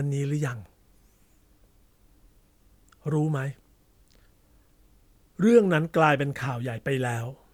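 No technical faults occur at any point in the speech, so there is nothing to place in time order.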